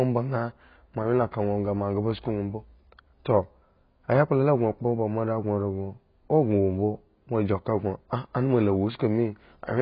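Speech, carrying heavy AAC compression damage from start to finish, likely from AAC-LC at a very low bitrate near 16 kbps. Nothing survives above about 5.1 kHz, so the sound is dull and smeared, with a warbling or fizzy texture on sustained sounds and sibilants. A plain low-pass filter would also remove the top end but leave what remains clean. Here the encoder's frame-by-frame quantisation also disturbs the band below the cut-off, leaving spectral holes or substitute noise.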